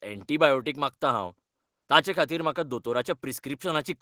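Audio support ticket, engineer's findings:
No audible faults found on listening; speech playback reproduces without dropouts, glitches or distortion, and no component fault is indicated.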